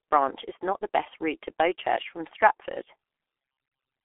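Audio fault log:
Throughout: G.723.1 codec. The audio is confined to a telephone band of roughly 300 Hz to 3.5 kHz, and its sound is heavily damaged. It is muffled and hoarse with smeared consonants, because the codec's slowly updated voice model, working at a bitrate consistent with about 6.3 kbit/s, cannot track fast changes.
3.68 to 3.71 s: VoIP packet loss concealed by the speech codec. A 30 ms gap, consistent with one lost codec frame, is filled by the decoder extending its last pitch and filter at falling gain. The result is a brief, fading stretch, and the frames right after it sound weakened.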